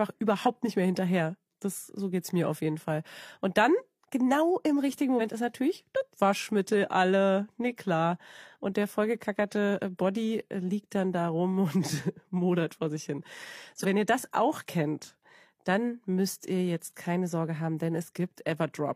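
Speech clip with two compressed frames skipped, at 5.16 s (after "dann genau im richtigen", before "ist natürlich das") and at 13.80 s (after "modert vor sich hin", before "wenn ihr"). Each time the audio jumps ahead by roughly 50 ms, which points to a single dropped frame of about 46 ms. No silent gap is inserted, unlike a dropout.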